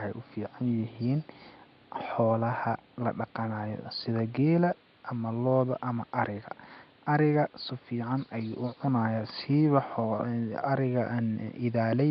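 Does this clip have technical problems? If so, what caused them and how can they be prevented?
Yes. The likely cause is Nellymoser compression, the Flash-era Asao codec, applied across the whole clip. It codes the sound in short blocks at a fixed two bits per sample, which fits a rate near 44 kbps. Bands too weak to earn bits are replaced with noise. The speech therefore carries a rough, hissy halo and a smeared, underwater colour that is plainly audible from start to finish. Background room noise sits about 34 dB below the speech. To prevent this, record or transmit with a modern codec such as Opus at an adequate bitrate.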